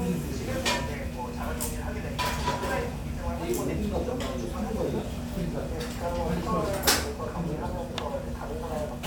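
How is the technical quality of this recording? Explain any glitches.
Nothing stood out as a technical problem on listening to this recording of sounds.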